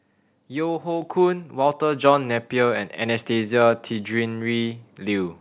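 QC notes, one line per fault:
1.02 s, microphone volume stepped up: the level jumps by about 5 dB in a single step, and the voice and the background noise floor rise together and stay there. That shared jump points to the input gain on the capture device being raised, probably by automatic gain adjustment reacting to a quiet microphone, rather than the talker getting louder. The band-limited sound, with nothing above 4 kHz, fits a narrowband telephone codec on the call path.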